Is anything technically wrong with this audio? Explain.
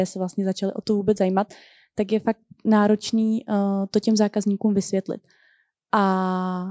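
No, nothing in this speech stood out as a technical problem on listening.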